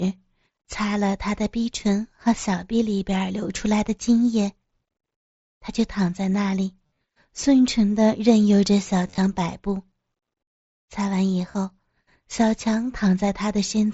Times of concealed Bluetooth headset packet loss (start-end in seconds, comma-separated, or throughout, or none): 6.87-7.01, 9.07-9.18, 11.52-11.54